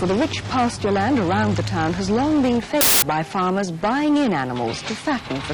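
From 2.81 to 3.02 s the reader assembles samples from the wrong bytes: each value is built with its bytes misaligned or in swapped order, so the rapidly changing low-order bits end up as the most significant part of every sample. The result is a burst of loud, harsh broadband noise lasting about 0.2 s.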